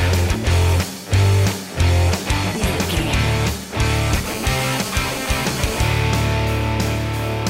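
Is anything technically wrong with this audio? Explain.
Yes. From 4.26 to 5.81 s there is GSM phone buzz: a nearby 2G phone on a call transmitted in bursts about 217 times a second, and the audio circuitry rectified those radio pulses. The result is a steady, harsh, raspy buzz at 217 Hz with many harmonics, unrelated to the program, sitting about 13 dB below the signal.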